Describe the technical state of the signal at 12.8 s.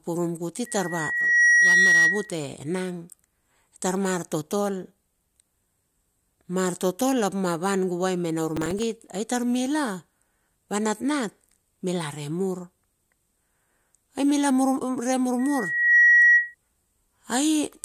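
At 12.8 s the speech signal is intact, with no technical fault present at that moment.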